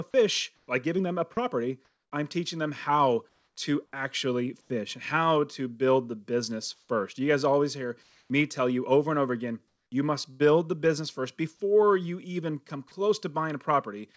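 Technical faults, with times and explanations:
0.56–0.68 s, 3.29–3.56 s, 4.61–4.70 s, 6.74–6.89 s (after "to build the business"), 8.03–8.30 s and 9.68–9.92 s: comfort noise in place of the background. In pauses of 90 to 270 ms, the faint real background turns into a steady, featureless hiss within about 2 dB of its level. The likely cause is discontinuous transmission: the sender went quiet and the receiver synthesised noise.
10.31–10.42 s: burst of packet loss, between "and over again you" and "the business first before". About 90 ms of sound is missing. The receiver stretched the last sound for about 85 ms and faded it. Speech then jumps ahead.
12.88–12.91 s: sound dropped by the voice detector, after "before you even come". The detector likely mistook the sound for background and stopped sending. About 20 ms of sound is lost and replaced by 30 ms of flat comfort noise before speech returns.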